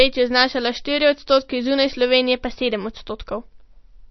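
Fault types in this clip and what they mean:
MP3 compression: The speech has nothing above 5.9 kHz, so it sounds dull and muffled. Weak detail flickers in and out, giving a watery, swirly texture, and onsets smear. The damage is plainly audible throughout. The likely cause is MP3 encoding at a low bitrate, around 32 kbps.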